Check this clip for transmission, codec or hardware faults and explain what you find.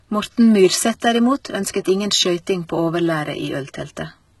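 One codec fault is present, running through the whole speech clip. Throughout, low-bitrate audio saved at a high bitrate: the speech has nothing above 11.8 kHz, likely because a very low-rate stream was re-encoded as high-rate MP3. Unlike native high-rate MP3, the original losses remain.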